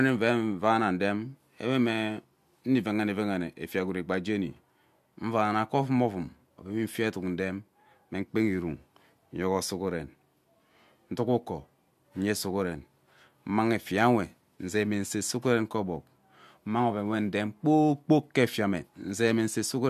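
No technical fault can be heard anywhere in the recording; the signal holds steady from the first moment to the last, with nothing interrupting or altering it.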